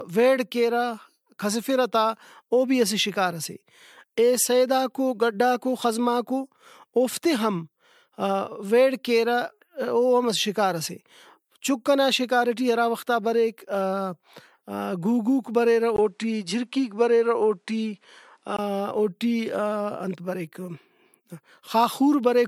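A speech recording whose sound is swirly, smeared and hollow from start to finish, with blurred attacks. This is likely generation loss from repeated lossy coding, and the artefacts fit about three passes through MP3 at 96 kbit/s, each pass re-quantising on a shifted frame grid. On a spectrogram, content stops at 20 kHz, with speckled holes and smeared transients throughout. Just after "گُوگُوک بریرہ", from 15.96 to 18.59 s, the sound turns dull and boxy, likely because the input switched to a poorer device. A 20 ms gap marks the switch, the level barely changes, and a new noise floor sits around 50 dB below the signal. The spectrogram shows a clear ceiling at 11.1 kHz over that stretch, and the waveform shows a brief flat dropout at the switch point.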